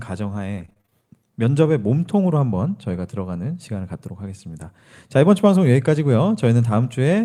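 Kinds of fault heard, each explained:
Repeated packet loss (robotic sound): Between about 0.57 and 0.93 s the speech breaks up into seven short holes, the longest about 26 ms, each filled by stretching the sound just before it, so around 38% of that stretch is patched rather than real. The quick run of holes and smeared fills gives a choppy, robotic texture. A single dropout leaves one clean gap or click, not this rapid chopping.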